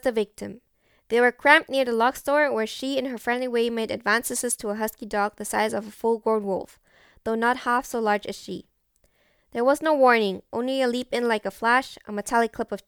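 Speech recording with no audible technical faults.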